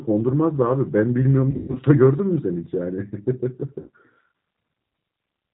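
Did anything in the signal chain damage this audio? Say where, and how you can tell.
Yes. At the codec stage the whole clip has been through G.729 (the G.729A variant at 8 kbit/s). This speech is rebuilt from a vocal-tract filter, a pitch predictor and a few pulses per 10 ms frame, so nothing above 4 kHz survives. The audio is band-limited and dull throughout, with a plainly audible rough, slightly synthetic edge on the voice that comes from that sparse pulse excitation.

At the network stage there is VoIP packet loss concealed by the speech codec, in two places. From 1.51 to 1.78 s, about 180 ms of audio is missing, scattered over a 240 ms stretch with the longest gap 120 ms. The pattern fits several lost packets. At 3.80 to 3.89 s about 60 ms is missing. Each time, the decoder keeps repeating its last pitch and filter at falling gain, so the sound smears into a fading buzzy tone or coloured noise, and because each frame builds on the last, it stays weak briefly after audio resumes.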